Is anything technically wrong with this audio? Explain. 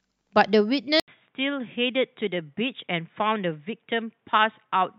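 Yes. An input switched to a poorer device at 1.0 s and stays that way to the end of the clip. After an 80 ms silence, the speech loses everything above 3.8 kHz, turning dull and boxy. It drops roughly 5 dB in level and sits on a faint new background noise well below the speech. The sudden change in bandwidth, tone and noise likely means the recording moved to a different, narrower-band microphone or headset path partway through.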